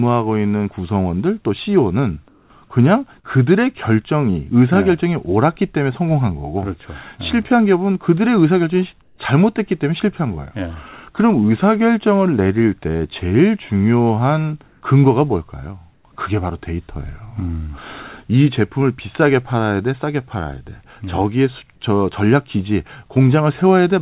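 At 2.28 s (220 ms), 9.02 s (160 ms, about 7 dB quieter), 14.68 s (140 ms) and 15.94 s (100 ms), pauses lose their background detail to smooth, featureless hiss. This is likely comfort noise in place of the background after transmission stopped. Spectrograms show flat, uniform grey patches.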